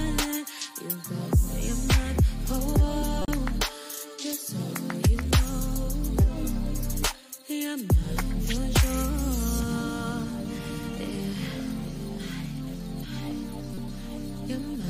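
Two short blips jump out of the audio, at 3.22 to 3.28 s and again at 13.74 to 13.78 s. Each is a corrupt frame decoded: damaged bits across a couple of compressed frames put energy at the wrong frequencies, and the first burst is a touch louder than the second.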